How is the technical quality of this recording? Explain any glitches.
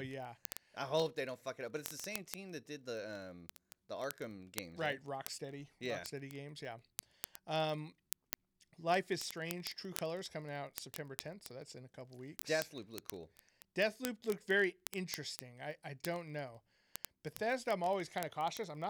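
The recording is compromised by continuous word clock ticks from 0.11 s to 18.89 s. An unlocked digital input drifts about 0.1% off the sender's clock, slipping single samples. This produces hundreds of sharp, uneven ticks roughly every 20 ms across the speech.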